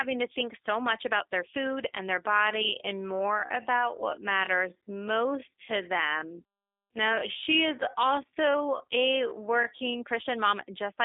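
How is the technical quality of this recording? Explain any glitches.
Two faults are audible in this speech recording: G.729 codec damage throughout, and a slowed, time-stretched section in the middle.

The G.729 codec damage runs the full length. The audio is confined to a telephone band of roughly 300 Hz to 3.6 kHz, with nothing above 3.7 kHz. The voice is rebuilt from a filter model, pitch prediction and a few pulses per frame, which fits an 8 kbit/s G.729A stream. It sounds clearly rough and synthetic.

The time-stretched section runs from 2.21 s to 9.99 s, starting just after "their food and their". The pace drops to about 0.58 times normal speed while pitch stays unchanged. This is likely a stretch that repeats short slices to fill time, leaving the speech dragging.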